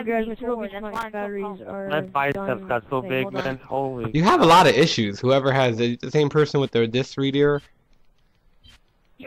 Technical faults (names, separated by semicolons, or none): loose connector crackle